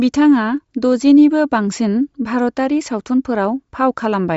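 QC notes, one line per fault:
Throughout: Bluetooth LC3 compression is the likely cause of the plainly audible damage. The speech has a breathy, grainy edge and nothing above 7.7 kHz. That fits LC3 at a low rate, around 32 kbps with 10 ms frames, zeroing the top band and filling gaps with noise.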